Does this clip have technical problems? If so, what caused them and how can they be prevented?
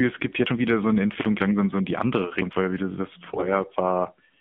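Yes. Throughout, the speech carries the sound of the AMR narrowband mobile codec: nothing passes above 3.6 kHz or below about 150 Hz, and the voice has a buzzy, synthetic edge, which fits a low mode around 7.4 kbps. Plain band-limiting would only sound muffled, but here the vocal-tract model itself audibly smears the voice. Using a wideband codec, or a higher AMR mode on a good link, prevents this.

From 3.30 to 3.47 s, just after "weil wie du", AMR bit errors make the voice turn hoarse and gargly for roughly six 20 ms frames. Corrupted pulse positions and gain values point to a heavily damaged radio link. Unlike packet loss, the pitch and level carry on, with no gap or repeat. Better radio coverage or stronger channel coding prevents it.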